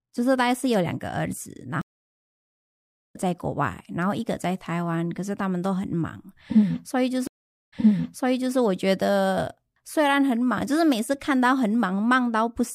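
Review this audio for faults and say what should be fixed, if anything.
Two stream reconnects break this speech. At 1.81 to 3.16 s, 1.33 s of silence ends with the audio about one and a half seconds further on. At 7.27 to 8.56 s, 447 ms of silence ends with 0.84 s repeated, as a resent burst would cause. Each time the connection dropped and a fresh decoder restarted mid-stream. A larger buffer and session resumption that continues from the exact position would prevent this.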